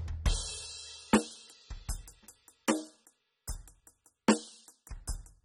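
From start to finish the music carries plainly audible codec damage, most likely from AAC compression using the AAC-LC profile. Nothing is present above 16.1 kHz, where the encoder has discarded the top band outright, and what remains below is coarsely quantised, so the sound comes across dull and smeared. The degree of damage points to a low bitrate in the region of 24 kbps, too little for the encoder to preserve fine spectral detail.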